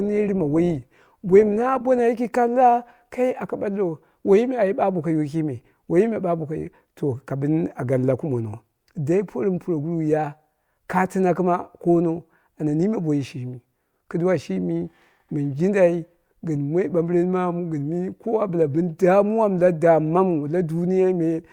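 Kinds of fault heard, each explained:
Adaptive stream starting at a low bitrate: for the first 2.0 s the speech sounds dull and more heavily coded, consistent with a start around 24 kbit/s to get playback going quickly. Then the quality jumps to a fuller, cleaner version, fitting about 64 kbit/s, with no gap.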